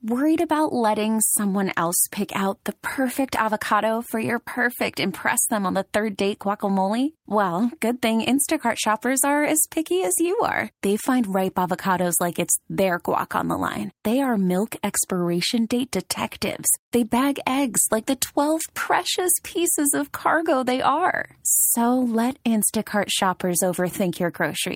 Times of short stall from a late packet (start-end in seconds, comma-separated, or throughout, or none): 16.84-16.89